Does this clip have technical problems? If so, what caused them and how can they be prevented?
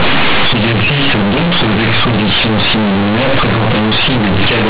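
Yes. The whole clip has one fault: companded audio read as linear. The speech was coded as mu-law, but the bytes are played as plain 8-bit linear samples with no expansion. Mu-law packs level on a logarithmic scale. Read directly, each change of sign swings the output across about half its range. Quiet sounds come out as loud as peaks. The result is harsh, buzzy distortion and heavy noise in the pauses. The 4 kHz telephone band itself is intact. To prevent it, decode mu-law to linear PCM before playback.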